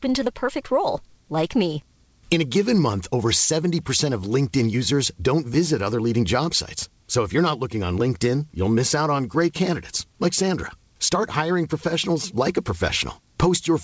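The speech arrives through a wideband call path with nothing above 8 kHz, which fits the G.722 codec, and no technical faults can be heard anywhere in the recording.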